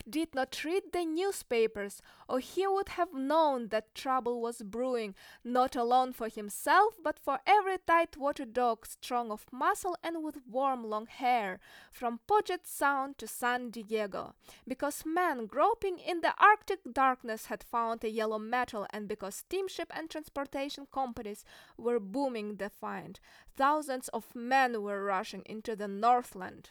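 Listening to the speech recording, nothing stood out as a technical problem at any point.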